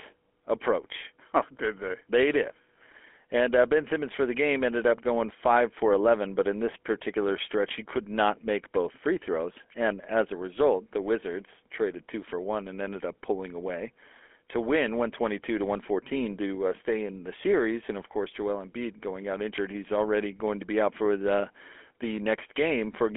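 Throughout, the speech carries GSM full-rate codec damage: a buzzy, gravelly roughness from coarse pulse excitation, with nothing above 3.7 kHz, consistent with 13 kbps coding.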